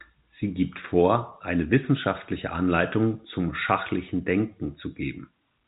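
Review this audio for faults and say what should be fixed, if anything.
No faults; nothing needs fixing.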